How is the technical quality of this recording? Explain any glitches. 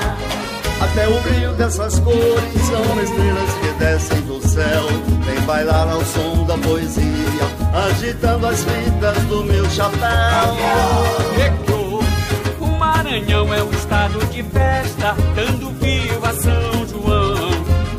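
The recording has a clear technical fault: word clock ticks run from 0.22 s to 17.87 s. They repeat about every 0.2 s, roughly a hundred in all. The receiving device's clock drifts against the sender's, by something like 100 ppm. At each slip, one sample is dropped or repeated. That produces a sharp tick of uneven strength.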